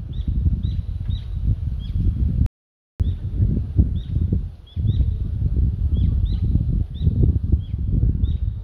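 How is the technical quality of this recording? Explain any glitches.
There's one glitch worth flagging: a rebuffering stall from 2.46 to 3.00 s. The player ran dry of downloaded audio, went silent for about half a second while it waited, then picked up exactly where it stopped. Nothing's missing, just an extra 0.53 s of dead air.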